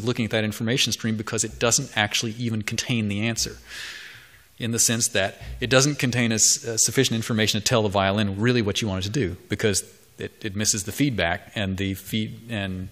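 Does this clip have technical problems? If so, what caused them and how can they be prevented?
Yes. Damaged data in a compressed stream hits twice, at 2.75 s and again at 11.46 s. At each point some bytes of the encoded file were lost or corrupted, so the decoder misread the frames there, lost sync and had to hunt for the next valid frame header. The result is a very brief chirp or blip, each lasting well under 20 ms. Prevention: deliver and store the file over a checksummed, error-corrected path, and verify its integrity before decoding.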